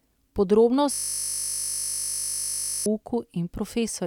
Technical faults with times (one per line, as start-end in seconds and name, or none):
0.94-2.86 system hang loop